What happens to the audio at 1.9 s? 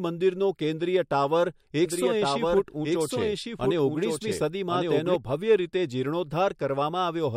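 A second copy of the speech abruptly cuts in, trailing about a second behind and a few decibels quieter, clean and full-band with no room colour, until it stops just as sharply at 5.16 s. This doubled audio track, running from 1.86 s, is likely the same signal mixed in twice, once through a slower path.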